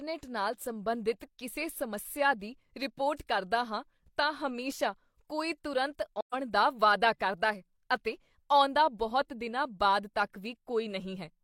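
AAC frame loss with muting occurs from 6.20 to 6.34 s in this speech clip, just after "ਤਾਂ ਹਮੇਸ਼ਾ ਕੋਈ ਤੁਰੰਤ". A gap of about 128 ms, which fits three lost frames, was silenced by the decoder, and overlapping windows fade the sound out and back in, leaving a soft-edged hole.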